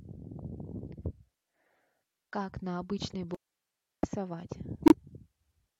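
Speech, with an audio dropout to a faint residue from 3.35 to 4.03 s. For about 0.69 s the signal vanishes abruptly rather than pausing or fading, leaving only hiss around 50 dB down, which shows the path stayed live while the source was likely lost. A corrupt frame muted follows at 4.86 to 4.93 s. Unlike the hiss-filled dropout, this hole is true silence, cut sharply, and it lasts 70 ms, which fits two compressed frames rejected by the decoder and blanked, with timing kept intact.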